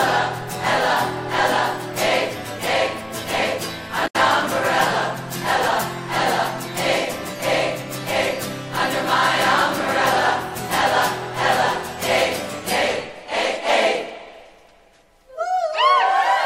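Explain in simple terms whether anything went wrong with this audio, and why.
Part of the compressed file was damaged, so the decoder briefly lost its place and had to hunt for the next clean stretch. This damaged data in a compressed stream is heard from 4.04 to 4.16 s as a short chirp or blip.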